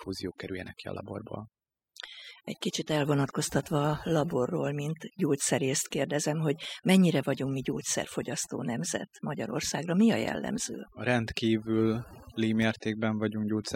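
Overdone noise removal runs through the whole speech clip. A noise reducer set far too aggressively is gating individual frequency bands whenever their level sits close to its noise estimate, and low-level parts of the speech fall below that threshold and are cut along with the noise. Between phrases the background collapses to near silence dotted with brief tonal chirps.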